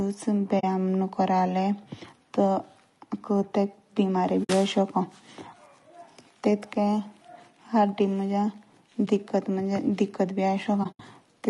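Low-delay AAC compression runs through the whole speech clip. The voice has a rough, grainy texture, with noise filling the gaps between harmonics and a thin, somewhat synthetic top band. This is likely AAC-ELD, the short-frame AAC used for video calls. Its brief frames resolve pitch harmonics poorly and spend bits quickly, and the damage heard here fits a bitrate near 32 kbps.

AAC frame loss with muting appears at 0.59 to 0.64 s, 4.43 to 4.50 s and 9.05 to 9.08 s. The final episode falls at 10.83 to 11.00 s. The gaps last about 40, 60 and 20 ms. The last episode is a cluster of holes totalling about 100 ms and includes a run of around 70 ms. The decoder zeroed the missing spectrum, and the overlapping windows ease the sound out and back in. Each hole is soft-edged. The lengths point to frames of about 20 ms.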